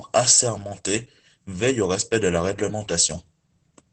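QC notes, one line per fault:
throughout: Opus voice compression. Speech is cut off above 8 kHz and sounds muffled, hoarse and slightly robotic. SILK's coarse excitation coding fits about 12 kbps.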